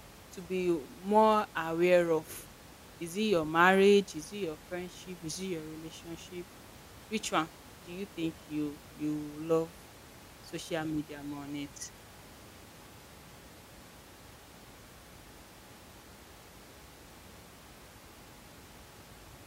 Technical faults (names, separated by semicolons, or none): none